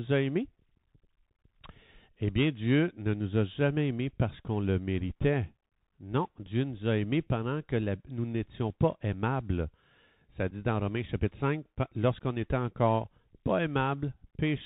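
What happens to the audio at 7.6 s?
At 7.6 s the speech is still passing through the Bluetooth CVSD headset codec that runs across the whole clip, which fits a 64 kbps CVSD link. Its one-bit, adaptive-step delta coding cuts everything above 4 kHz, roughens s sounds and lays a granular hiss under the speech.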